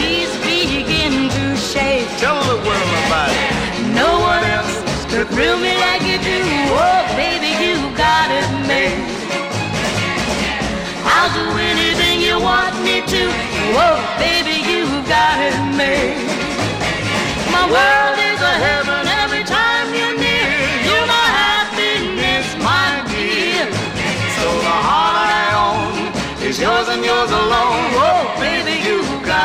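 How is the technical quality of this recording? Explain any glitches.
Nothing in the recording stood out as a problem on listening.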